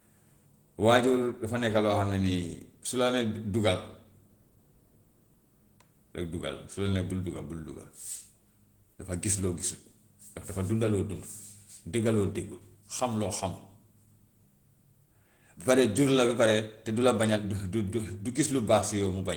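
Opus voice compression runs throughout, sounding like roughly 16 kbps hybrid coding, so the speech comes out plainly hoarse and a bit robotic despite full bandwidth.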